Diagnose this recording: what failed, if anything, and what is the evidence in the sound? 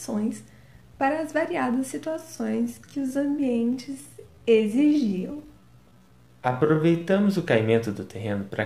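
A time-stretched section runs from 2.00 s to 7.26 s, where the pace drops to about 0.68 times normal while pitch holds steady, leaving the sound dragging. The likely cause is software stretching, which repeats short slices to lengthen the passage without lowering pitch.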